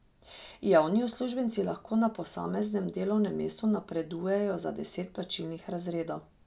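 No technical faults are audible anywhere in the recording.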